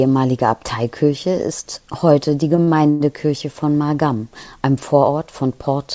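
Just after "ist heute die", late packets twice left the jitter buffer empty, causing a short stall from a late packet each time: at 2.56 to 2.60 s the receiver held the last sound for 17 ms, and at 2.64 to 2.78 s for 36 ms. Nothing is lost, but the syllable drags with a slight buzz or dip.

At 2.90 to 3.02 s comes a call audio freeze, likely from packets held up in transit. The receiver stretched the last sound for about 100 ms as a fading buzz or hiss that never reaches silence, then resumed where it stopped. The result is an inserted gap within speech that has no content above 8 kHz, which fits a G.722 call path.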